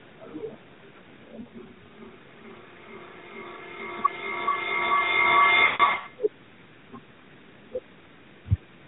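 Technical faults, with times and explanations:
1.42–1.45 s, lost AMR speech frames: a quick dip or warble, as two frames (40 ms) failed and the decoder briefly reused the last good settings.
5.66–6.07 s, lost AMR speech frames: 280 ms of lost frames scattered over 400 ms, drawing out and fading during a 140 ms run, as the decoder stretched old settings with falling gain.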